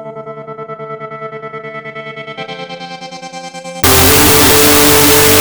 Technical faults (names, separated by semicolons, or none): wrong sample width